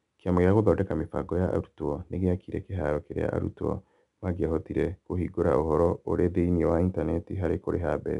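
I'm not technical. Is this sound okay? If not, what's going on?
No. The speech has 4-bit ADPCM compression throughout. Each sample is stored as a tiny step, which adds gritty hiss to louder speech. Nothing is heard above 10.7 kHz.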